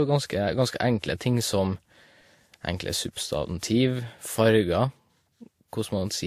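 Throughout the speech there is no content above 15.2 kHz, and the artefacts of two different lossy codecs are heard together. This is likely transcoding between lossy codecs, with a WMA encode at around 96 kbit/s followed by Vorbis at around 47 kbit/s. The second encoder spends its small budget reproducing the first codec's damage, adds its own, and keeps the lower bandwidth ceiling.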